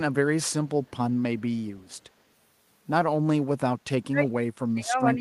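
An echo canceller on a loudspeaker-side endpoint has likely failed to remove everything its microphone picked up, so a brief scrap of echo leak is sent back into the speech from 0.86 to 0.91 s and again from 1.89 to 1.93 s. Each leak is a copy of the speech trailing it by 120 ms, very faint, sitting far below the main speech, heard as a short ghostly tail rather than a clear repeat.

From 4.08 s to the end of the clip at about 5.2 s, there is speech suppressed in double talk. The far side was likely talking at the same moment, and the echo canceller could not tell the near talker apart from its loudspeaker echo, so it turned everything down. The speech sinks sharply, by as much as about 30 dB at its deepest, and sounds pushed back and partly swallowed until the clip ends.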